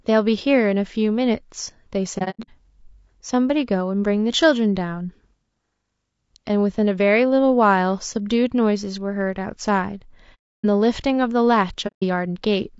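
This speech clip has a rough, grainy quality throughout, with a hiss-like fill between the harmonics and a top band that sounds thin and synthetic. The likely cause is low-delay AAC compression of the AAC-ELD kind used for video calls, at a bitrate that sounds to be around 32 kbps. Its short frames resolve pitch harmonics poorly. On a spectrogram the harmonic stripes look smeared, with noise filling the gaps between them and an upper band that looks patchy or artificial. AAC frame loss with muting cuts holes at 2.18–2.49 s, 10.34–10.65 s and 11.87–12.03 s. In these spans the decoder zeroed the missing frames, and the overlapping windows fade the sound out and back in, so each gap has soft edges. The first hole is broken up rather than a single gap, with about 210 ms missing spread over 300 ms and the longest silence around a tenth of a second. The second drops a full 300 ms, and the third drops 150 ms. 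A waveform shows short tapered dips to silence, and a spectrogram shows blank vertical bands across all frequencies.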